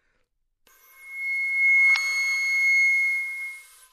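At 1.92 to 1.96 s, damaged data in the compressed stream makes the decoder misread the corrupted frames, lose sync and hunt for the next valid header. The sound breaks into a brief chirp, squawk, click or short hole lasting about 40 ms.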